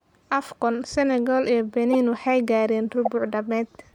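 Speech with two corrupt frames decoded: a brief chirpy burst at 1.90 to 1.95 s, just before "waxay gaareen", spanning a couple of frames, and a single-frame blip at 3.05 to 3.08 s after "waxay gaareen", peaking near -10 dBFS. Spectrograms show short, misplaced broadband smears.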